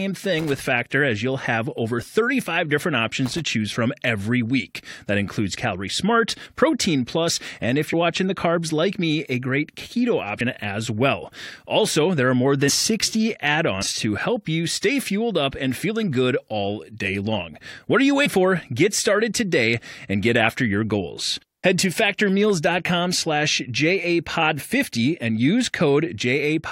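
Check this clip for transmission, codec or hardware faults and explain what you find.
Two kinds of fault show up here: a hardware contact problem near the start and a codec-side dropout problem later on.

Loose connector crackle, 0.39 to 0.59 s and again 3.26 to 3.41 s: a worn or dirty contact keeps making and breaking, chopping the signal. You hear a short, ragged burst of scratchy crackle each time.

Compressed frames skipped at 12.68, 13.81 and 18.25 s: whole chunks of encoded audio never get played, so the speech jumps forward. The first two skip about 100 ms and the last about 150 ms, which fits frames of roughly 21 ms.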